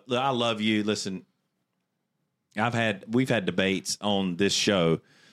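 There are no technical faults to describe anywhere in this speech recording.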